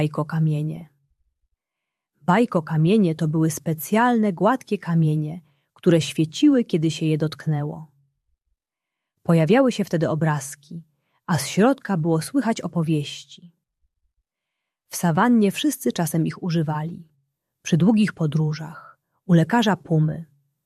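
Two short bursts of DAB burbling break into the audio, at 0.76 to 0.81 s and at 12.84 to 12.99 s. Weak reception lets bit errors slip past error correction into the MP2 data, so corrupted samples put short blips of noise into single sub-bands, with the first burst pointing to a much higher error rate. A spectrogram would show isolated rectangular blocks flaring in narrow bands, each up to a frame long.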